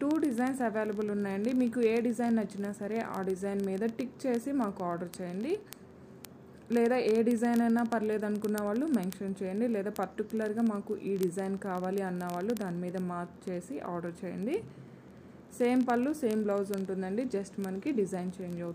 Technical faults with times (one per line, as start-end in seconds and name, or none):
0.11-18.73 word clock ticks